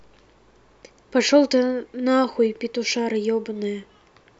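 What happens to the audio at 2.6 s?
Nothing goes wrong at 2.6 s; the speech carries on intact through that moment with no dropout, click or distortion.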